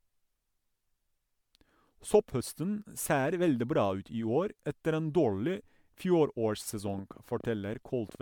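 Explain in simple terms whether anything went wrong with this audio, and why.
Two things went wrong. The whole recording has a swirly, hollow, smeared quality, with the starts of sounds blurred. That points to generation loss: it was likely saved in MP3 format about seven times over, each copy adding fresh damage. One poor-quality save would sound dull or fizzy, but not this layered and watery.

From 6.88 s to 8.16 s there is a train of clicks, around ten sharp ticks at nearly nine per second, spaced unevenly and about as loud as the speech. They all sound alike and sit on top of the voice, which is likely interference or a faltering audio connection, not the random crackle of a worn recording.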